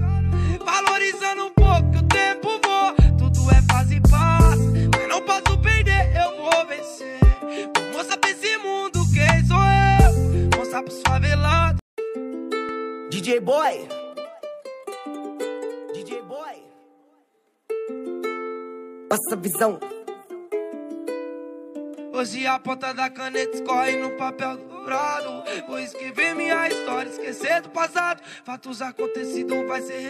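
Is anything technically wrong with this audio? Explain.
Yes. Around 8.09 to 8.12 s, likely a broken MP3 bit reservoir: after frames went missing, the next frame borrowed bytes from the wrong frame, producing a brief glitch and forward skip.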